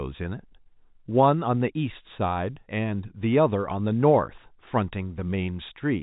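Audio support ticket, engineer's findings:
No faults found in the speech. The G.711 telephone path is working as expected, with the band topping out near 3.8 kHz and any coding damage faint at most.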